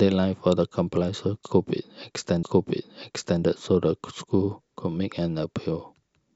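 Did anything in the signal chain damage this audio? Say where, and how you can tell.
Yes: at 2.42 s the speech jumps back and replays about a second (to 3.42 s) after a small blip, a stream segment repeated when the player queued the same segment twice.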